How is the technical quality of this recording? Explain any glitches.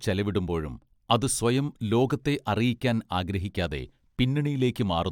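The technical quality is good, with no glitches to explain.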